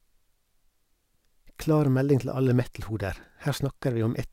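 No technical faults can be heard anywhere in this speech recording. Nothing in the audio calls for comment at any point.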